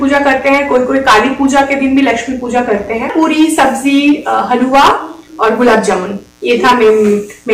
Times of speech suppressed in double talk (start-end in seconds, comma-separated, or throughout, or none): none